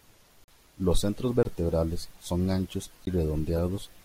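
At 0.44 s (40 ms), 1.43 s (20 ms) and 3.05 s, just after "son anchos", blocks of digital silence appear, likely where the output buffer went unfilled. The waveform drops flat to near silence with hard edges, and the spectrogram shows blank vertical gaps, heard as pops and short holes. From 3.56 to 3.59 s, a corrupt frame was decoded across a couple of frames. Wrong gains or misread codes put energy at the wrong frequencies, which shows on the spectrogram as a bright, out-of-place smear and is heard as a brief chirp, squeak, blip or burst of noise.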